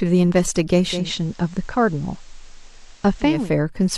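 A short speech clip with a digital radio blending to analogue fault. At 0.83 s the receiver loses its digital signal and cross-fades over about 326 ms to the FM broadcast of the same station. It stays on FM until 3.53 s. During that stretch the level drops by about 2 dB. A steady hiss also rises, sitting around 30 dB below the signal. The sound then blends back to digital.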